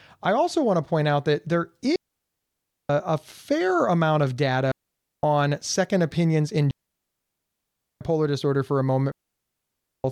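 Four digital wireless dropouts cut into the speech at 1.96 to 2.90 s, 4.71 to 5.23 s, 6.71 to 8.01 s (the longest, 1.3 s) and 9.11 to 10.04 s. Each time the receiver lost too much of the radio link's data and muted, fading out within a few milliseconds. The result is a clean hole of near silence with no noise burst at either edge, seen as a flat gap in the waveform and a blank vertical band across the spectrogram.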